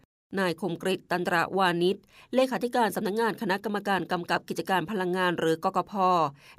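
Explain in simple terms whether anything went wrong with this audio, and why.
Nothing went wrong here.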